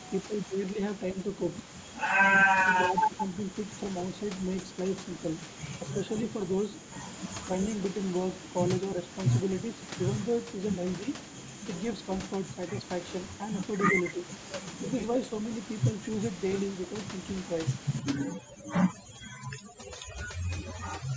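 Right at the start, 0.23 to 0.8 s, the speech dips hard, by roughly 20 dB at worst, then again from 2.61 to 3.27 s and briefly at 14.15 to 14.22 s. That's most likely speech suppressed in double talk: the echo canceller couldn't tell this talker from the far side's echo and turned both down.

From 17.99 s to the end there's overdone noise removal. The room noise drops and breaks up into little twinkly specks.

Inside that stretch, at 18.4 to 18.65 s and 19.61 to 19.78 s, a faint copy of the speech trails by about 0.3 s, sitting roughly 30 to 35 dB down. That's likely echo leak, with the far end's canceller letting some of the loudspeaker sound back through.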